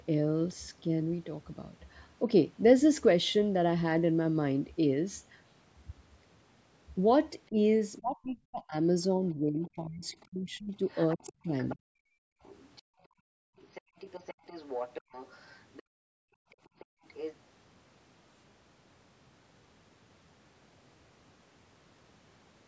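From 7.49 to 12.0 s the speech is turned down in patches, about three seconds in all, dipping by up to roughly 30 dB and thinning or breaking into pieces. This is speech suppressed in double talk, most likely because both ends spoke at once and the echo canceller could not separate the talker from the loudspeaker echo, so it attenuated everything. The drops follow the overlap rather than the talker's own pauses, which separates this from a noise gate closing between phrases.

The other side's voice leaks through in five scraps, each a second voice distinct from the talker. There is a faint flicker at 9.63 s, and a longer stretch from 10.88 to 11.76 s at around 20 dB under the speech. The third is quiet, from 12.43 to 12.82 s. The fourth, from 13.57 to 15.83 s, is louder at roughly 15 dB below, and then from 16.52 to 17.35 s it rises to about 10 dB below. The likely cause is the echo canceller leaving part of the loudspeaker signal in the microphone. 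Because it is a different voice, it cannot be mistaken for reverberation of the talker.

Between 12.28 and 13.96 s, and again from 15.83 to 17.04 s, the room sound itself is gated by the echo canceller. It drops by about 38 and 39 dB for a second or so in total while the loudspeaker plays, then returns. What gives this away is the background vanishing, not the speech.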